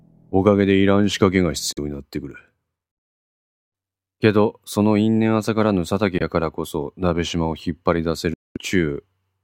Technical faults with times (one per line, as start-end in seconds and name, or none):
1.72-1.79 Bluetooth dropout
6.18-6.22 Bluetooth dropout
8.34-8.57 Bluetooth dropout